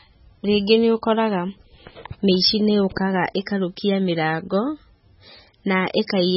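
From start to finish the speech has no content above 5.6 kHz and is heavily damaged, with a watery, swirling texture and smeared onsets, most likely from MP3 compression at a very low bitrate, around 16 kbps. Starved of bits, the encoder cuts the treble and drops weak frequency lines that flicker on and off between frames. That flicker is what separates it from a plain low-pass filter, which would dull the top end but leave the rest steady.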